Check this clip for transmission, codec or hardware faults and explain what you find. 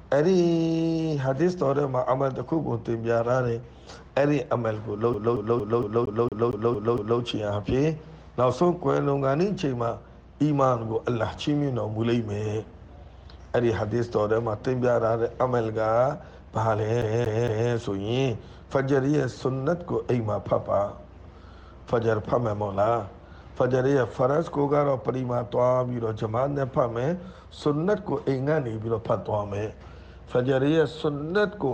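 The audio shows one hardware fault, CD stuck on one turn, at 5.14 to 7.20 s and again at 17.02 to 17.71 s. A scratch makes the laser jump back one track at the same point each revolution, so a 230 ms slice replays with a brief mute at every jump. It repeats nine times in the first episode and three in the second, giving the quick, evenly spaced stutter of a skipping disc.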